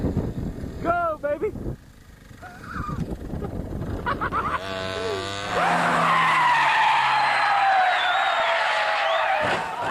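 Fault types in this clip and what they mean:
Low bit depth without dither: A grainy distortion that follows the sound runs throughout at roughly 40 dB below the signal, roughening quiet passages and making the faintest parts step. This points to a likely cause of rounding to about 8 bits without dither, so the error tracks the waveform.
DAB burbling: From 8.40 to 8.66 s the sound breaks into short blips of noise in single frequency bands. Bit errors from weak reception, a small fraction of a percent, slipped past error correction and corrupted samples over a run of frames.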